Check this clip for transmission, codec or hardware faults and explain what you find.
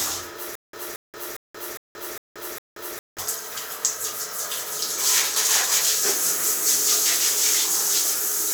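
One fault is present: a stutter with silent gaps from 0.55 s to 3.19 s. The likely cause is the playback or stream stalling, with each retry replaying the last buffered fragment before running dry again. The same burst of about 227 ms repeats six times, each followed by about 179 ms of digital silence, giving an even 406 ms rhythm. Whatever sound belonged in that stretch never arrives and is lost.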